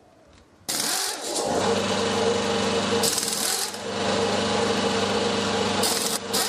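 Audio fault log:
0.68 s and 6.16–6.18 s, compressed frames skipped: whole compressed frames, each about 23.2 ms, were lost or rejected by the decoder, so playback jumps ahead, by roughly a tenth of a second at 0.68 s and around 0.3 s at 6.16 s, leaving a join where the audio resumes.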